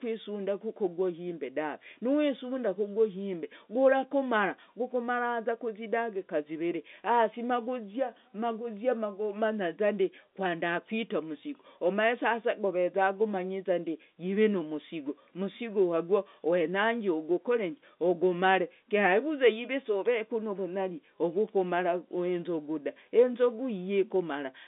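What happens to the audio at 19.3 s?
At 19.3 s the speech carries on intact, with nothing breaking up or dropping out, only the narrow band of the G.711 telephone line, roughly 200 Hz to 3.6 kHz.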